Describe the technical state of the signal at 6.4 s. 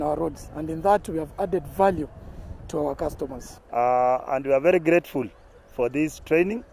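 At 6.4 s the signal is intact, with no audible fault at that moment.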